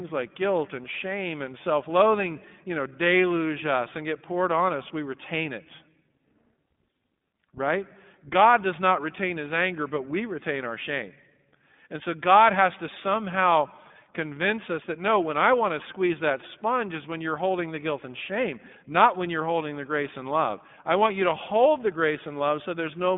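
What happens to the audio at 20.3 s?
At 20.3 s, as throughout the whole clip, the speech carries iLBC codec damage. Each short frame, consistent with 20 ms frames at 15.2 kbps, is coded independently, and the line band of 150 Hz to 3.6 kHz removes everything above 3.7 kHz. The result is plainly rough, synthetic and muffled.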